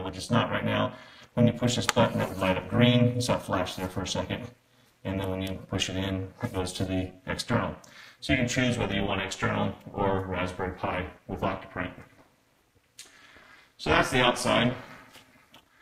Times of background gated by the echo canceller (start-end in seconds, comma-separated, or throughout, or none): none